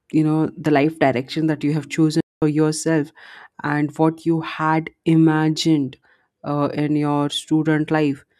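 The player most likely ran short of data or had its output thread blocked, causing a playback stall from 2.20 s to 2.42 s. The speech cuts off in mid-flow and the output falls completely silent for about 0.21 s before sound returns.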